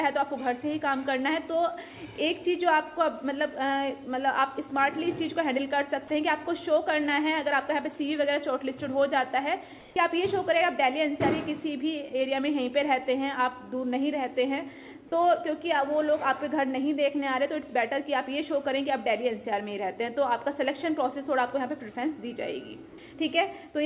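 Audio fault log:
9.8–9.96 s and 22.9–22.98 s, comfort noise in place of the background: sending likely paused under discontinuous transmission, so steady, featureless synthetic noise briefly replaces the real background at nearly the same level.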